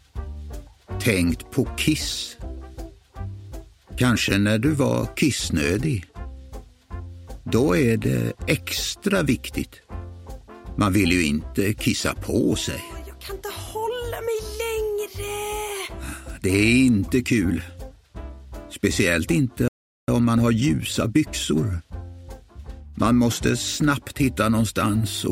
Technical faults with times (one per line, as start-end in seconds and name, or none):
19.68-20.08 playback stall
20.08-21.66 time-compressed catch-up